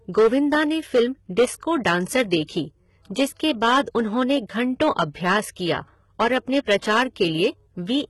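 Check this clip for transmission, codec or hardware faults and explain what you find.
Three problems are audible in this speech recording: clipping across the whole clip, a low-bitrate codec sound throughout, and one brief pre-echo.

Hard clipping runs from start to finish. The loudest moments of the speech break up into gritty distortion instead of staying clean. The signal was driven about 8 dB beyond what some stage could carry, so a few percent of the waveform had its peaks sliced flat. Those flat tops create new harmonics well above the original content, and that is the added edge on every peak.

Throughout the clip the treble has a synthetic, heavily processed character. Sibilants sound gritty, metallic or lispy, and nothing is present above 11.8 kHz. This is likely HE-AAC compression, specifically the v2 flavour at a rate that points to around 16 kbps. That codec keeps only the lower band as real coded audio and fakes the upper band by copying lower content upward under a coarse envelope. 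Because the copied harmonics don't line up with the real ones across the join, the highs sound artificial.

Pre-echo occurs once, at 6.81 s. A short hiss of about 16 ms arrives just ahead of a sharp onset, and the attack itself sounds softened. A transform codec spreads quantisation noise evenly across each block. When a sudden loud event lands late in a block, noise sized for that loud part also spills into the quiet stretch before it, so the hiss is heard before the attack.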